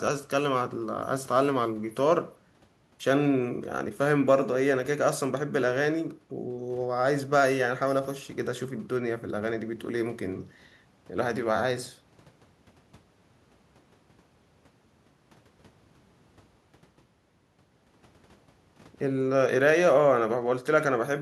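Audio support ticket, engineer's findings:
No audible technical fault found in the speech signal; level, continuity and timing hold steady throughout, with nothing in the playback path requiring action.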